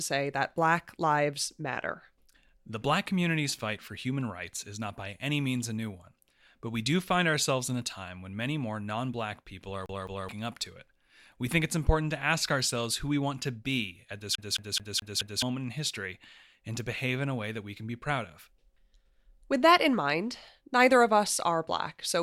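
At 9.86 to 10.29 s and again at 14.35 to 15.42 s, a CD stuck on one turn replays the same 0.21 s of speech, twice and then five times. Each jump leaves a tiny mute, giving an evenly spaced stutter rather than a smeared or random glitch.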